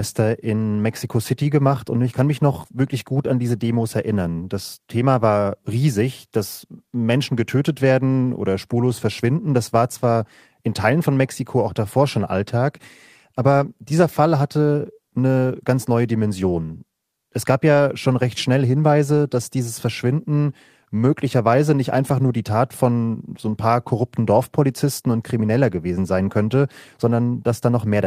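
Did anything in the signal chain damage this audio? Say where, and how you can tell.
No, no damage detected.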